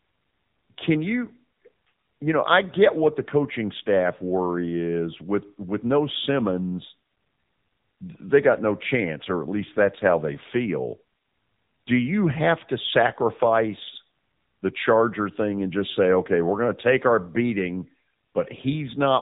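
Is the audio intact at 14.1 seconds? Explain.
No. At 14.1 seconds the speech carries AMR narrowband mobile codec damage, as it does through the whole clip. This is the 2G and 3G phone codec. It resamples to 8 kHz and rebuilds the voice from a vocal-tract model driven by a few pulses per subframe. Nothing above 3.8 kHz survives, so the voice sounds dull and boxy. The damage is plainly audible, a buzzy, synthetic texture that fits a low mode near 8 kbps.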